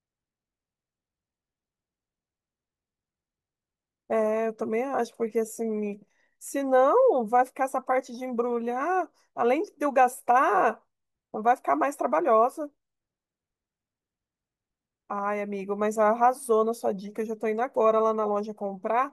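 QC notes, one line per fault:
No faults are heard in this speech recording. Nothing in it calls for a QC note.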